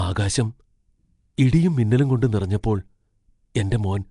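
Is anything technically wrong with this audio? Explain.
Yes. Throughout the speech, a likely Nellymoser compression stage codes fixed blocks at about two bits a sample, zeroing weak bands and noise-filling them, leaving a hissy, smeared, underwater sound with nothing above 10.6 kHz.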